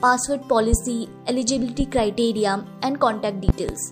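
A loud pop hits at 0.73–0.77 s, roughly 15 dB over the audio, then a double pop at 3.49–3.72 s nearer 20 dB, likely a switch or static voltage spike.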